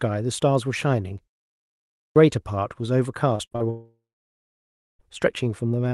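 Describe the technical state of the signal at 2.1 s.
At 2.1 s the signal is still inside a clipped start after a pause, which runs from 1.56 to 2.16 s. After a silence of about 0.38 s the output path had gone idle, and it needed roughly 0.6 s to wake and resume. Everything arriving in that window was dropped, so the sound comes back abruptly out of silence, already partway through, with its opening portion missing.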